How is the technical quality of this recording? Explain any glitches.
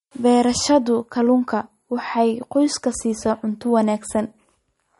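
The recording has plainly audible compression damage that lasts the whole clip. The speech sounds dull and watery, with a swirly, unstable texture on the s sounds and consonant attacks that smear rather than snap. Nothing is present above 11.2 kHz, a hard treble ceiling. The likely cause is MP3 compression at a low bitrate, which fits roughly 46 kbps: starved of bits, the encoder chops off the top band at a fixed frequency and drops weak frequency lines that flicker on and off between frames, producing that watery shimmer.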